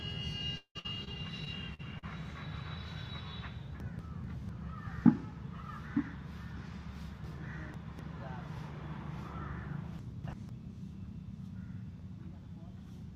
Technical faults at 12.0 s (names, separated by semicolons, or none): none